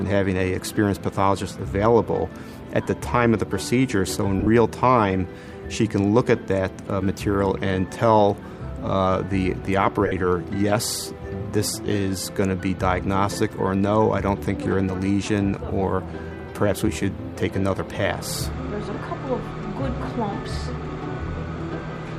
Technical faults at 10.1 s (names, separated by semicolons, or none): lost LE Audio frames